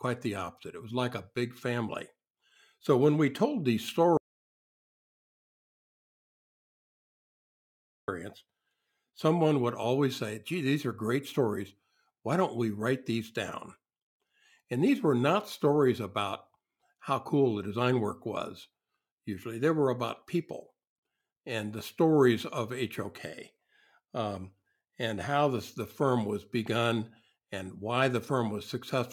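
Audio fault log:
4.17 to 8.08 s, audio dropout to silence: just after "when we told these" the speech cuts off mid-flow and the signal falls to silence for about 3.9 s, then the talker comes back already mid-sentence. No room tone or noise floor survives in the gap, which sets it apart from a quiet pause or a gate closing. The likely cause is a lost input, such as a disconnected device, a failed link or a stray mute, while silence kept being written. Whatever was said in that stretch is gone.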